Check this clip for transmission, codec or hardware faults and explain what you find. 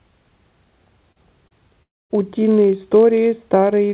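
Three kinds of fault are audible, alongside the narrowband sound of the G.711 call path, which has nothing above 4 kHz.

Block size mismatch (padded), throughout: a steady low buzz at about 46.9 Hz sits under the whole clip. A stage delivers blocks shorter than the next one reads, fitting a 1024-sample read size, and zero-fills the remainder. The resulting gap in every block produces the buzz, while the speech runs only 0.999 times normal speed, at essentially unchanged pitch.

Short concealed packet loss, at 1.12 to 1.19 s and 1.48 to 1.54 s: each is a brief smear or wobble. About 40 ms of audio arrived too late, and the receiver covered 36 ms and 30 ms respectively by extending the preceding sound before blending back into the real signal.

Long network dropout, from 1.83 to 2.13 s: the sound stretches into a fading buzz or hiss, then goes silent for roughly a quarter of a second. Speech resumes at 2.13 s with about 280 ms missing. 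The cause is likely a stall in packet delivery, concealed by the receiver until it gave up.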